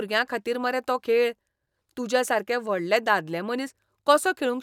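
A short speech recording with nothing technically wrong with it at any point.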